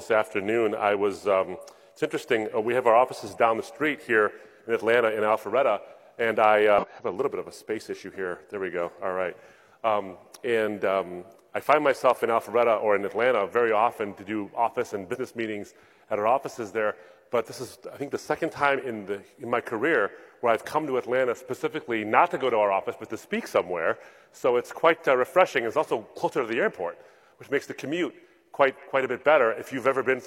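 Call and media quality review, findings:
Damaged data in a compressed stream: three short chirp/blip bursts, about 63 ms each, at 6.78–6.85 s, 15.10–15.16 s and 18.72–18.78 s. Probable component is the decoder input. Corrupted bytes cause misread frames, lost sync and a search for the next header.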